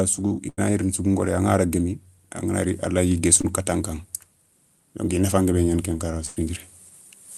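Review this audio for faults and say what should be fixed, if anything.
Burst of packet loss at 0.49–0.59 s, after "su i" and before "gni rini sougou ngooré", and again at 6.26–6.43 s: the receiver extends and fades the last sound for roughly 80 and 100 ms, then jumps ahead with that audio missing.

Short concealed packet loss at 3.41–3.45 s, between "a layi" and "katan ka": about 20 ms is synthesised from the preceding sound and blended back, leaving a brief smear.

Automatic gain rising from 5.13 to 6.67 s: the gain control lifts the level by about 3 dB, and speech and background swell together.

A larger jitter buffer with in-band FEC would reduce the losses, and fixing the capture gain so AGC needn't ride it would prevent the swell.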